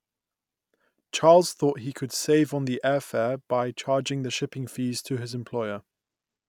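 No technical faults can be heard anywhere in the recording. Nothing in the speech stands out for comment on technical grounds.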